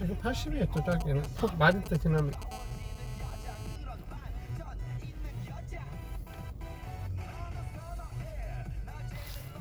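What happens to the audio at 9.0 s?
Nothing goes wrong at 9.0 s; the sound continues intact through that moment, with no dropout, click or distortion.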